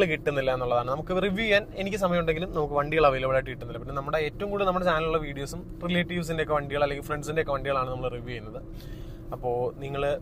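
No technical faults are audible.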